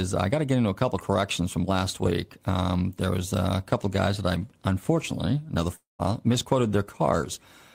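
At 5.75 s, just after "that I unfortunately another", the speech breaks off until about 6.02 s. This is likely a long network dropout, where audio stopped arriving and the receiver had to cover the gap. The last sound is stretched into a fading buzz or hiss for roughly a quarter of a second, about 150 ms of which is near silence. Speech then resumes, but roughly 240 ms of it is simply gone.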